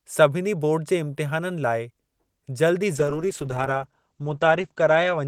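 Speech, and from 2.97 s, right after "जल्दु ई", a call bitrate drop takes over to the end: encoding falls from 48 to 11 kbps, top band collapses from 20 kHz to 8 kHz, sounding muffled and watery, steady rather than glitchy like packet loss.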